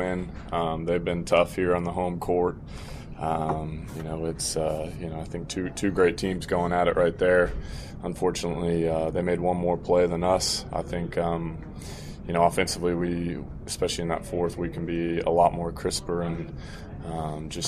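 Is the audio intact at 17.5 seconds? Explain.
Yes, at 17.5 seconds the audio is intact, with no dropout, click, distortion or other fault at that moment.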